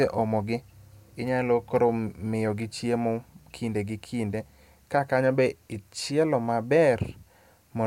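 Nothing goes wrong anywhere in this bit of speech, so there's no fault to point out at any moment.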